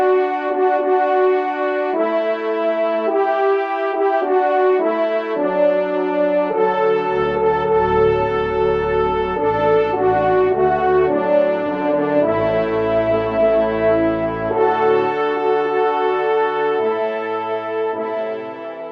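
No technical faults are audible.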